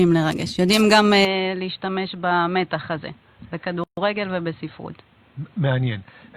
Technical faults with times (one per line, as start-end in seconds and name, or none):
1.25-6.37 input switched to a poorer device
3.84-3.97 gap at a join of encoded pieces